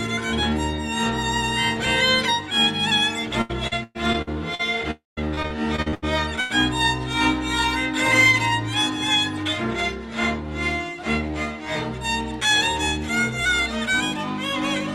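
From 3.41 to 4.61 s the sound turns choppy, with a robotic quality as short pieces keep dropping out and being replaced by smeared repeats. This is repeated packet loss (robotic sound): six gaps, the longest 113 ms, together about 340 ms of missing audio, with concealment covering 28% of the stretch. The receiver keeps extending the last good sound into each hole, and the next hole arrives before the sound can settle.

At 4.91 s a brief continuation of the last sound fades out and gives way to about 160 ms of silence before the audio returns at 5.19 s, with about 260 ms of material simply gone. This is likely a long network dropout, where nothing reached the receiver for that interval. Its fill-in faded to nothing, and playback resumed further along without the lost portion.

The robotic chopping returns from 5.35 to 6.04 s as a second run of repeated packet loss. There are seven gaps, the longest 78 ms, adding up to about 220 ms missing, with 31% of the span concealed. 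The holes are shorter than in the first run but more frequent, giving a similar stutter.

At 6.40 to 6.52 s a single short fill-in that dies away marks a burst of packet loss. About 100 ms went missing in one run. The receiver stretched the preceding sound while turning it down, then picked up later in the stream, so the material between is skipped.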